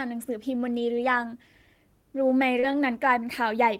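At 0.97 to 0.99 s, a lost packet rebuilt from error correction: one 20 ms stretch, which fits a single lost packet, was played from the low-bitrate copy carried in the following packet. There is no gap, but that moment sounds briefly rougher and noisier than the surrounding speech.

From 2.59 to 2.73 s comes a short concealed packet loss. About 40 ms of audio arrived too late, and the decoder filled roughly 33 ms by extending the preceding sound before blending back, adding around 20 ms. It is heard as a short smear or wobble. Inside it, at 2.63 to 2.65 s, another 20 ms packet was rebuilt from error correction, adding a brief patch of coarse, noisy texture.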